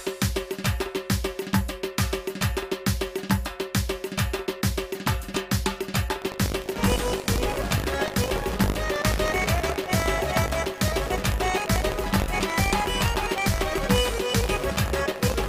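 From 6.2 s to the end of the clip there is buffer tearing: the software filling the playback ring buffer and the hardware draining it have drifted out of step, so their positions cross within every period. A small slice of each buffer, a few percent, carries stale audio from around 70 ms earlier, joined abruptly on both sides. The result is a continuous robotic rattle at 50 Hz, pointing to a 20 ms buffer period, that follows the signal.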